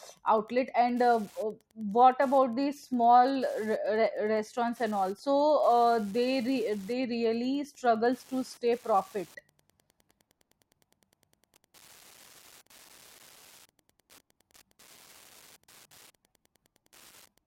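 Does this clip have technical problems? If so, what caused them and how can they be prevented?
Yes. Wi-Fi interference runs through the whole speech clip as a faint, steady ticking about ten times a second, well below the speech. The audio circuit is picking up a nearby Wi-Fi radio's beacon, sent every 102.4 ms, and rectifying it into audible clicks. On a spectrogram this shows as evenly spaced thin vertical lines across the whole frequency range, and on the waveform as tiny regular spikes. Keeping routers and phones away from the microphone, preamp and cables, and using shielded balanced cabling, prevents it.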